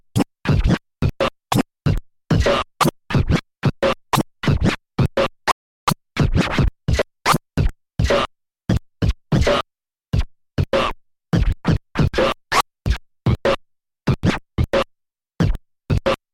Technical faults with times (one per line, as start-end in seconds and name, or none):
5.51-5.88 rebuffering stall